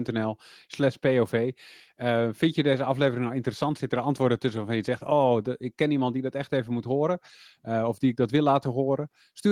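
Nothing stood out as a technical fault on listening to the recording.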